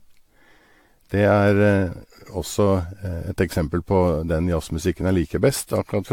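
From start to end the speech sounds swirly, smeared and hollow, with blurred consonant attacks and nothing above 19.2 kHz. This is likely generation loss: around seven rounds of lossy AAC-LC coding, consistent with 96 kbit/s, each requantising on a shifted frame grid.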